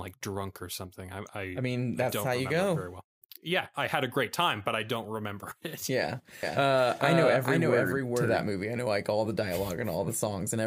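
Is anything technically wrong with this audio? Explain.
Yes. From 6.43 to 8.43 s, just before "movie I know like", a doubled audio track appears: a dry, equal-level copy lags about 400 ms, likely from a second, slower capture path, and cuts in and out abruptly.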